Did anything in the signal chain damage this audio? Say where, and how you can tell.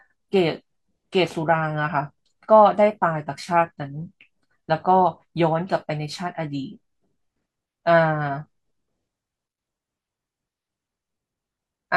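No, nothing in the signal chain has damaged this speech recording. There is no audible sign of trouble at any stage, from capture through to playback.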